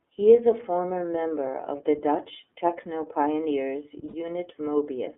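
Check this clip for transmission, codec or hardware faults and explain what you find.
Two faults are present: the whole clip has passed through the iLBC codec, and a short dropout of lost iLBC frames occurs near the end.

iLBC codec, throughout the clip: the speech has been squeezed into a narrowband VoIP codec that codes each 30 ms frame's excitation independently. The band runs from about 250 Hz to 3.4 kHz, so the speech sounds thin and boxy, with no air above that. The coding damage is plainly audible as a rough, slightly synthetic grain on the speech, consistent with the 13.33 kbps mode.

Lost iLBC frames, 4.08 to 4.15 s: packets went missing, and the decoder covered the gap by repeating the last pitch cycle blended with noise. About 60 ms is concealed, which points to two consecutive 30 ms frames. The gap is heard as a briefly held, faintly buzzy vowel-like tone instead of the real speech. 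Because iLBC frames do not depend on earlier ones, the speech snaps back to normal almost immediately afterward.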